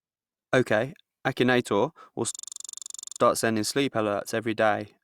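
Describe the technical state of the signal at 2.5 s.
A system hang loop runs from 2.35 to 3.20 s, so the signal at 2.5 s is caught inside it. The playback side stalled while the sound hardware kept replaying the same stretch of its ring buffer. A 42.67 ms slice, which fits a 2048-sample buffer, repeats exactly about 20 times at 23.4 Hz, giving a rapid machine-gun stutter. Essentially no audio is lost; the speech resumes with "sending sleep alerts every".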